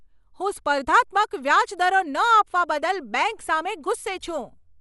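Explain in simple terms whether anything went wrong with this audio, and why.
Throughout the speech, the sound is dull and muffled, with a rough, fluttery hiss clinging to the voice and nothing above 11.5 kHz. That points to Dolby Digital compression, likely squeezed too hard, so the encoder discarded treble and detail and the decoder filled the gaps with noise.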